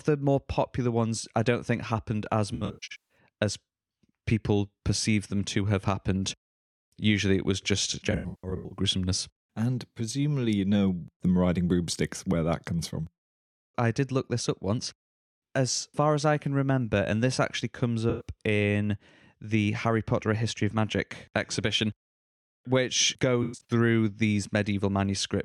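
AAC frame loss with concealment hits this speech four times. From 2.54 to 3.18 s, about 0.45 s of audio goes missing in bursts, the longest roughly 150 ms. The decoder fills each gap from the last good spectrum. The result is a smeared, noisy, phasey patch. The same happens from 8.11 to 8.77 s. Shorter patches follow from 18.09 to 18.27 s and from 23.43 to 23.71 s.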